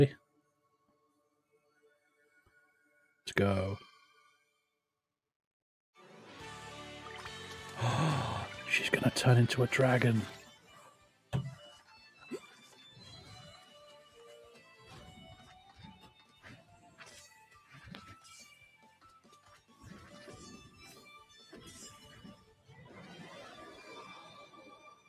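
Noise suppressor applied to music or sounds, throughout: a suppressor tuned for speech stays active across the whole clip. It treats sustained tones, ambience and reverberant tails as noise and pulls them down, so the level swings by roughly 15 dB as its gain rises and falls. Onsets pass largely intact while what follows them sags, giving a pumping, fluttering, thinned-out texture.

Sound cut by the noise suppressor, 0.2 to 2.24 s: the suppressor clamps down on a stretch of steady sound for about two seconds, dropping it by up to about 11 dB. Held material sinks and its decay is shortened rather than ringing out.

Loud pop, 3.38 to 3.40 s: a single sharp pop jumps roughly 20 dB above the surrounding sound, which carries on underneath. It is likely a brief voltage step from a plug, switch, static discharge or driver glitch, shaped by the circuitry that follows.

Sound cut by the noise suppressor, 4.44 to 4.78 s: a shorter dip of up to about 10 dB.

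Loud pop, 9.81 to 9.83 s: another single pop, around 15 dB above the sound.

Sound cut by the noise suppressor, 10.56 to 11.32 s, 11.79 to 12.21 s and 12.6 to 12.78 s: a cluster of dips reaching about 11, 8 and 5 dB. Sustained parts are repeatedly ducked.

Sound cut by the noise suppressor, 16.04 to 16.99 s: a drop of up to about 8 dB.

Loud pop, 17.95 to 17.97 s: a pop again some 20 dB above the sound.

Sound cut by the noise suppressor, 18.75 to 19.77 s and 22.36 to 22.74 s: both dip by up to about 10 dB, with tails cut short.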